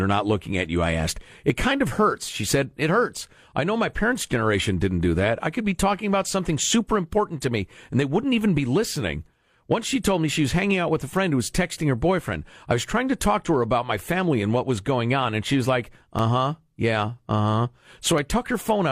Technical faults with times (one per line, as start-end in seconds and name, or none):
16.19-18.18 periodic USB or driver dropouts